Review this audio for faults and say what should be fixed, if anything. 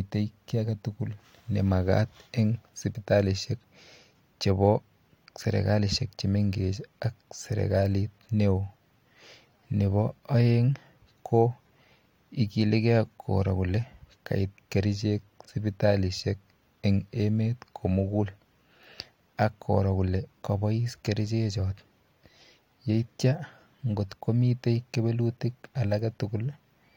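Nothing to fix: no faults audible anywhere in the speech.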